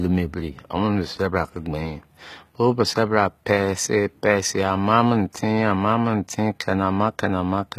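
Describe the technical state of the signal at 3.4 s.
At 3.4 s the speech carries HE-AAC compression damage across the whole clip: treble that sounds bright but gritty and lispy on s sounds, likely from spectral band replication copying lower bands upward, consistent with roughly 20 kbps. A spectrogram shows blocky, repeated upper-band patterns and nothing above 14.9 kHz.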